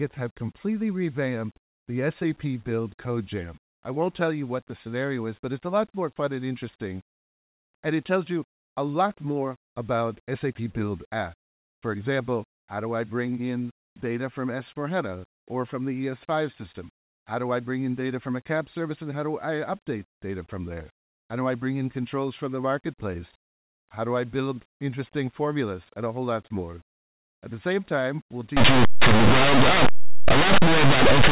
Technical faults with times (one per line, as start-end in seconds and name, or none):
28.57-31.31 linear audio read as companded